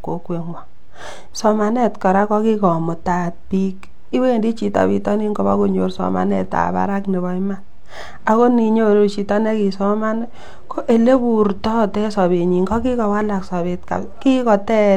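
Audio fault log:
No technical fault can be heard anywhere in this speech recording.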